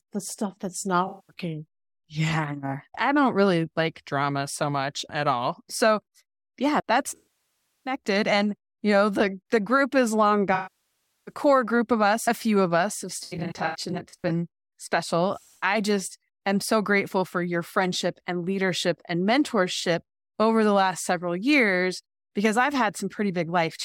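AAC frame loss with concealment strikes at 1.07 s after "the stuff that's", 7.16 s after "yeah that's", and 10.54 s after "the group is long". Brief losses scatter from 13.23 to 14.30 s. The decoder rebuilds missing frames from the last good spectrum. The 0.2 s gap smears. The 0.7 s gaps decay, then fade back.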